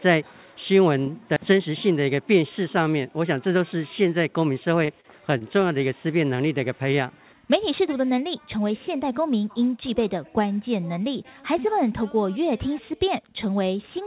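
Between 4.85 and 5.73 s there's a burst of repeated packet loss that makes the audio choppy. Five short holes land in that stretch, the longest around 35 ms, and each one gets papered over by stretching the last bit of sound before the next hole arrives. Roughly 14% of that span is concealment rather than real audio. It's carried over a G.711 mu-law call path, so there's nothing above 4 kHz.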